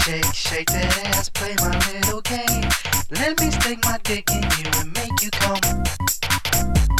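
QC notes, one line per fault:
No faults heard; nothing to log.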